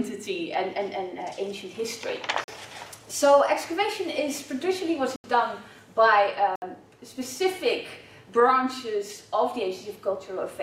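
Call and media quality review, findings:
Blocks of digital silence at 2.44–2.48 s (40 ms), 5.16–5.24 s (80 ms), 6.56–6.62 s (about 65 ms). Hard cut to silence and back, so a short hole. Playback path probably missed filling the output buffer in time.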